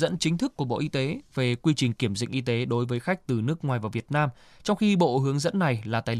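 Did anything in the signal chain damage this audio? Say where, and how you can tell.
No, nothing in the signal chain has damaged this speech recording. There is no point in it where the sound changes in a way that would point to a failing stage.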